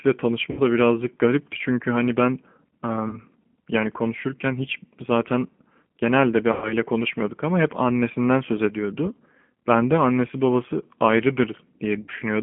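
Speech heard through the G.729 codec, confined to roughly 200 Hz to 3.4 kHz and rough and synthetic in a way plain telephone band-limiting would not cause. VoIP packet loss concealed by the speech codec occurs at 0.51–0.61 s, 3.09–3.21 s, 6.52–6.74 s and 12.02–12.12 s, covering about 60, 40, 100 and 60 ms of lost audio. Unlike a silent dropout, each gap is filled with a fading extrapolation of the last sound, and weakness lingers briefly afterward.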